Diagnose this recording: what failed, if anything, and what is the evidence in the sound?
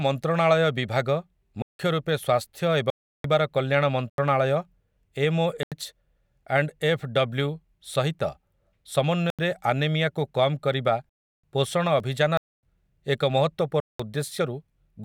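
Blocks of digital silence from buffer underruns at the driver or buffer stage: the speech drops to silence and back abruptly at 1.62, 2.90, 4.10, 5.63, 9.30, 11.09, 12.37 and 13.80 s. The 85, 170 and 340 ms gaps point to unfilled output buffers.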